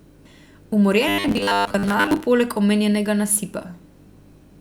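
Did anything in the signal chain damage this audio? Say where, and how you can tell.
Yes, there's robotic sound from repeated short buffers between 1.08 and 2.24 s. The speech collapses into a stiff, metallic buzz at 100 Hz, which fits a roughly 10 ms chunk looping. The cause is likely buffer underruns at the driver stage, with most of the real audio skipped.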